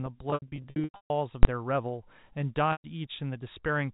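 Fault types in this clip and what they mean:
Packet loss with pitch repetition: 0.3–1.1 s and 2.72–2.84 s; missing audio is bridged by repeating the last pitch period, fading it out over about 50 ms.
Invalid numbers at full scale: 1.43–1.45 s; a calculation yields invalid values that pin the output at one extreme value for a 20 ms block, heard as one bang.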